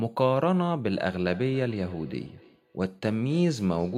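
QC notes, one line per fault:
0.9 to 3.97 s, feedback echo between two devices: from 0.9 s the speech returns as a delayed copy, repeating at roughly 0.3 s intervals to the end, at its loudest about 22 dB below the direct speech. A second device in the same room plays back what this microphone sent, and the microphone captures that playback again. This device's echo canceller removes only its own output, so the returned sound passes through.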